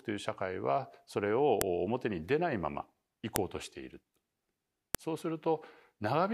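At 1.61 s, 3.36 s and 4.95 s a sharp, loud click cuts into the speech. Each is a file header played as audio. Separate WAV pieces were joined with their headers left in. Those header bytes play back as samples, so every join snaps.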